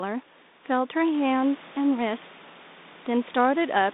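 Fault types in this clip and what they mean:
Nothing's wrong with this one: the background room noise picks up by about 10 dB around a second in but stays well below the speech, and the telephone-band coding sounds light.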